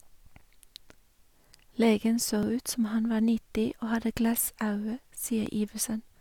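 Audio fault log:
0.40 s, 2.43 s, 3.44 s, 4.45 s, 5.46 s: overlapping chunks. At each join, 12 ms of audio plays twice because each one-second chunk begins before the previous one finishes. This causes a brief stutter or click just before "som han var", between "som han var" and "og hadde", and just after "og hadde".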